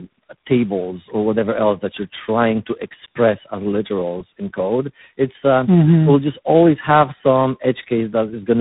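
Throughout, the speech shows tandem speech coding: three separate speech codecs in series, consistent with iLBC, CVSD and finally G.726, each re-encoding the previous one's errors. The result sounds rough, muffled and warbly, with nothing above 3.8 kHz.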